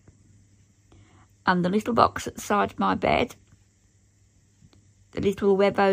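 Nothing in the audio stood out as a technical fault on listening.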